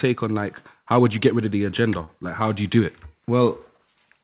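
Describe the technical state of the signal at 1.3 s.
At 1.3 s the speech is intact, with no dropout, glitch or distortion, only the narrow telephone-band sound of the call codec, which carries nothing above 4 kHz.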